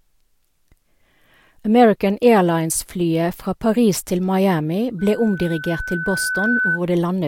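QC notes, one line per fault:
4.99–6.80 s, loudspeaker feedback squeal: a single 1.5 kHz tone swells over roughly a second and a half to about speech level, as the microphone re-captures its own loudspeaker and that frequency keeps reinforcing itself. Unlike a steady interfering whistle, it builds rather than starting full.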